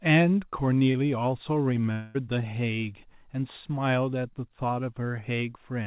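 At 0.92 to 0.96 s a short concealed packet loss occurs: about 20 ms of the speech never reached the decoder in time, so the receiver stretched the preceding sound forward to cover the gap and then cross-faded back into the real signal. The G.711 mu-law call path carries nothing above 4 kHz. It is heard as a brief smear or wobble, and whatever was in that instant is gone.

From 1.92 to 2.16 s the speech is replaced by a continuation of the last sound that fades, lasting roughly a quarter of a second, with no fall into silence before real audio resumes. The likely cause is a long network dropout: some 220 ms of audio never arrived, the concealment filled the whole hole, and the speech picks up further on with that stretch missing.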